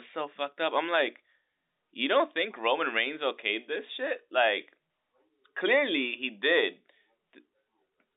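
No faults in the speech; the G.711 telephone coding confines it to the usual 300 Hz to 3.7 kHz phone-line band.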